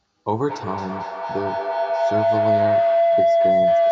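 Feedback howl runs from 0.33 s to the end of the speech. A second device in the room is picking up the loudspeaker, and each trip round the loop returns louder. The sound narrows into a tone near 700 Hz, pulsing roughly every fifth of a second and peaking about 8 dB above the speech.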